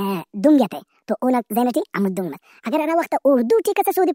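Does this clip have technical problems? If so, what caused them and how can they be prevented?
Yes. The whole clip has a wrong sample rate problem: the speech runs 1.5 times too fast and sits about 7 semitones too high, so the voice sounds rushed and chipmunky from start to finish. Speed and pitch shift together by the same 1.5 ratio, which fits audio captured at 32 kHz being played back at 48 kHz with no conversion. To prevent it, make sure the file's rate is passed along correctly, or resample to the playback rate before the audio reaches the output.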